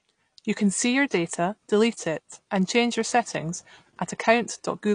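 From start to finish the speech sounds dull and smeared, with a warbling, fizzy edge on sibilants; this is likely AAC compression at a low bitrate, around 32 kbps. A spectrogram shows nothing above 9.8 kHz.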